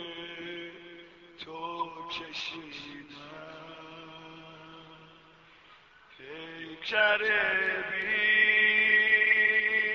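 No technical faults can be heard anywhere in the recording; the signal stays steady and intact throughout.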